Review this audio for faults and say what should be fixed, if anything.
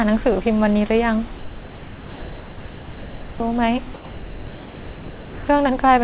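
From 1.38 to 3.40 s and again from 3.94 to 5.48 s, the speech gives way to steady, even noise, losing about 1.4 s and 1.2 s of sound before it abruptly returns. This is likely sound dropped by the voice detector: the sender classed speech as background and stopped transmitting, and the receiver filled each gap with comfort noise. Lowering the detector's threshold or lengthening its hangover time would keep low-level speech from being cut.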